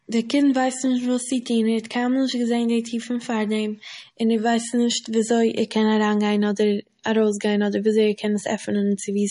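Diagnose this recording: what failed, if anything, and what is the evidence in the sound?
Codec stage: plainly audible MP3 compression throughout the speech, with nothing above 10.6 kHz and watery, swirling artefacts, likely a starved encoder at about 40 kbps.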